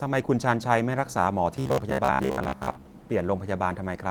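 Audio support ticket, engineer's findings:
Robotic sound from repeated short buffers, 1.57 to 2.93 s. Likely cause: audio arriving too seldom, so playback repeats the last ~15 ms chunk. Roughly half the audio repeated, half skipped. Fixed 66.7 Hz buzz imposed on speech, giving a rigid metallic sound. Opus hybrid fullband coding at 20 kbps audible alongside, light codec texture only.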